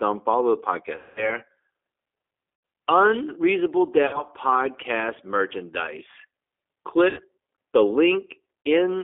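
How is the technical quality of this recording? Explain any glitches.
Technical quality is poor: the speech passes through a narrowband G.729 codec throughout, with five dropouts from VoIP packet loss concealed by the speech codec.

G.729 codec: the whole clip is confined to a telephone band of roughly 300 Hz to 3.5 kHz. The low-rate 8 kbit/s model rebuilds the voice from a filter and sparse pulses, so it sounds rough and synthetic. A spectrogram shows nothing above 3.5 kHz.

VoIP packet loss concealed by the speech codec: at 0.96 s (200 ms lost), 2.55 s (80 ms), 4.07 s (60 ms), 7.09 s (80 ms) and 8.67 s (40 ms), the decoder repeats its last pitch and filter with falling gain. The voice smears into a fading buzzy tone or coloured noise and stays weak just afterwards. The waveform shows a decaying envelope, and the spectrogram shows flat, stretched harmonics.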